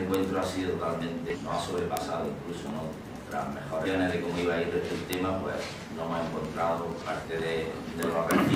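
A steady run of sharp ticks, uneven in strength, starts at 0.14 s and continues to 8.5 s, about ten per second. These are word clock ticks: the receiving device runs on its own clock, roughly 200 ppm off the sender's, so one sample is dropped or repeated each time the clocks slip.

Short glitches cut through at 1.30 to 1.36 s, 3.82 to 3.87 s and 6.98 to 7.03 s. These come from damaged data in a compressed stream: corrupted frames throw the decoder out of sync until it finds the next valid frame header.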